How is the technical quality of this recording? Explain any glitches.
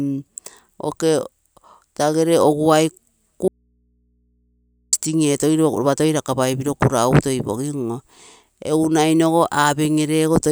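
The recording has one clear glitch: an audio dropout to a faint residue between 3.48 and 4.93 s. The signal feeding the recording path was likely interrupted for about 1.45 s while the input stayed open and live, so nothing of the speech reached it. Right after "tagere oguai" the speech cuts off abruptly, leaving only a low mains hum roughly 45 dB below the normal level. It snaps back just as sharply at "etogim ropa toi rakapai", with no fade on either side.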